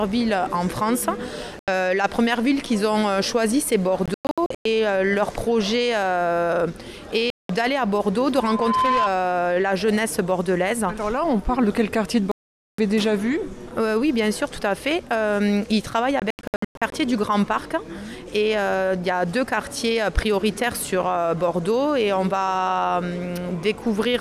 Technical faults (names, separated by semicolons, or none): Bluetooth dropout; loudspeaker feedback squeal